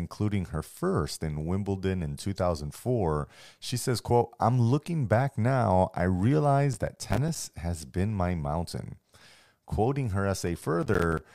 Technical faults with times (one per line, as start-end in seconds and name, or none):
6.73-7.56 processor overload crackle
10.47-11.22 processor overload crackle